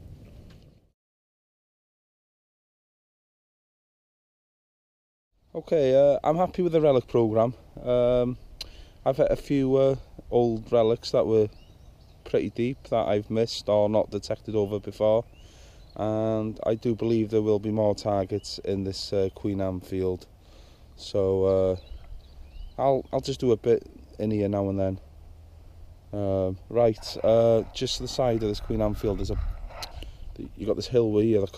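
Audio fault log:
Nothing stood out on listening to this audio.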